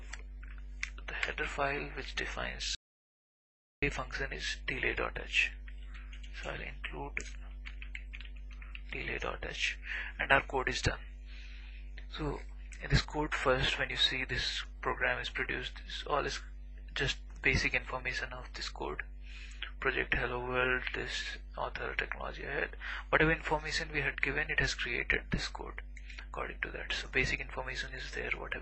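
There's an audio dropout to silence from 2.75 to 3.82 s. The sound cuts off mid-flow and leaves about 1.07 s of dead silence, with no room tone at all, before it snaps back. That's likely the input dropping out, through a disconnect or a stray mute, while recording carried on.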